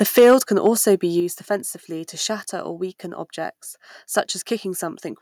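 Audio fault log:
0.01–0.35 s, microphone overload: the opening syllables before "can be also" sound harsh and crackly, with flattened, gritty peaks. The likely cause is input gain set about 6 dB too hot, so roughly 7 percent of samples hit the converter's ceiling and were squared off.
0.19 s and 1.20 s, microphone volume stepped down: the level drops abruptly, voice and background together, first by about 3 dB during the distorted opening, then by about 6 dB between "can be also" and "offensively to shatter or". This is likely the call software cutting the device's input volume in single steps after detecting the overload.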